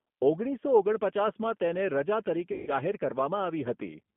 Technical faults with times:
0.00-4.16 G.729 codec
2.52-2.71 VoIP packet loss concealed by the speech codec

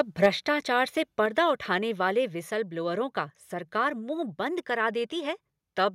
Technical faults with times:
0.00-0.26 microphone overload
0.26 microphone volume stepped down
1.26 microphone volume stepped down

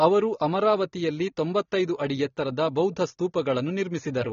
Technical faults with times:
0.00-4.32 AAC compression

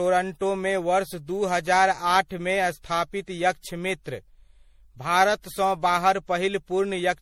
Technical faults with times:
0.00-7.21 generation loss

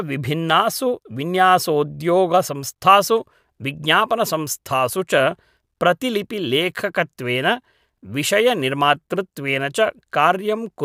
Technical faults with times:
0.50 block of digital silence

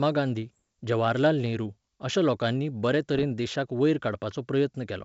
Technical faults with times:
0.42-0.61 bit errors on an ADPCM link
3.14-3.25 bit errors on an ADPCM link

